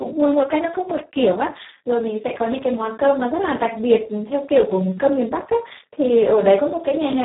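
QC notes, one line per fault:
Throughout, Speex codec: speech is hoarse and buzzy, nearly robotic, with nothing above 3.8 kHz, which fits a very low bitrate around 4 kbps, unlike a plain low-pass.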